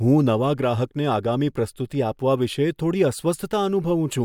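Nothing in this recording stands out as a technical fault, so there's really nothing here to walk through moment by moment.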